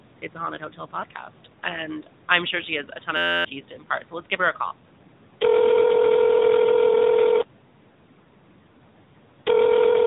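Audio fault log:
throughout: AMR narrowband mobile codec. Speech passes through a low-rate mobile coder near 10.2 kbps, so it sounds plainly buzzy and synthetic. On a spectrogram, energy stops at 3.8 kHz, with a flat empty band above and smeared, pulse-driven harmonics below.
3.17–3.45 s: system hang loop. After "she has a ton", playback froze and a single 11.61 ms fragment, which fits a 512-sample buffer, repeated about two dozen times, giving a steady 86.1 Hz buzz before "to impart so let's". Roughly 300 ms of audio is lost. The waveform shows an identical repeating block, and the spectrogram shows evenly spaced harmonic lines.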